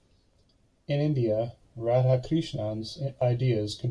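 A short speech recording with no audible technical faults anywhere in the signal.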